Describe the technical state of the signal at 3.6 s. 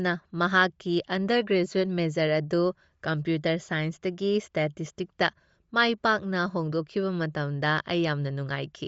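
At 3.6 s the speech carries Bluetooth LC3 compression damage, present throughout the clip, likely from LE Audio's transform codec at a low rate, around 32 kbps with 10 ms frames. The upper band sounds breathy and grainy, and a spectrogram shows thinned, noise-filled high frequencies blocked into 10 ms steps.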